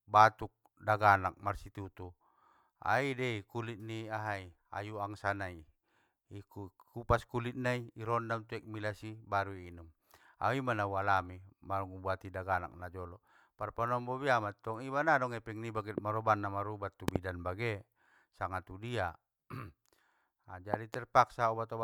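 A voltage transient entering the chain, likely from a switch, plug contact or driver glitch, adds loud pops on top of the speech, which carries on underneath. The first, a single pop from 15.98 to 16.00 s just after "nggadong epeng niba get", jumps about 15 dB above the signal. A double pop follows at 17.08 to 17.18 s after "na marubat tu", and another double pop at 20.74 to 20.96 s, both about 20 dB up.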